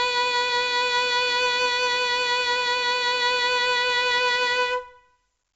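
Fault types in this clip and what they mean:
4-bit ADPCM compression: heavy gritty hiss rides the loud music and attacks sound rough, with nothing above 7.8 kHz, from coarse 4-bit predicted steps.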